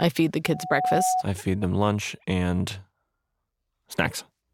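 From 0.45 s to 1.23 s, right after "feed the" and before "I feed them lunch", a loudspeaker feedback squeal rises at 741 Hz. The microphone is hearing its own loudspeaker, and at that one frequency the loop gain passes unity, so the tone feeds itself, swelling over roughly four tenths of a second until it sits a few decibels above the speech. That self-building swell, rather than a tone present at steady level from the start, is what separates it from an interfering whistle or hum.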